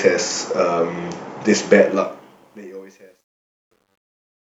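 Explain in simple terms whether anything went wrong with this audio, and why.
Something went wrong in the fade-out. From 1.80 s the speech turns gritty. From 2.61 s to the end it is at its worst. This is truncation distortion on a fade. Too few volume steps were kept, which fits about 11 bits, with no dither, so quiet sound becomes rough steps.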